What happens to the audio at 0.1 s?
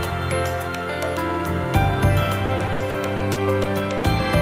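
Nothing goes wrong at 0.1 s; the audio plays through that moment intact, with no dropout, click or distortion to be heard.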